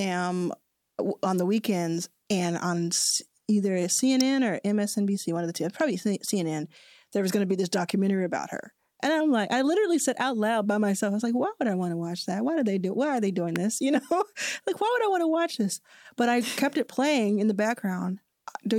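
Speech, with two sharp snaps sitting on top of the signal at 4.21 s and 13.56 s, the second right after "are they doing". Each is a very brief click, peaking near -10 dBFS and -15 dBFS, most likely an electrical switching spike picked up from a nearby switch or discharge.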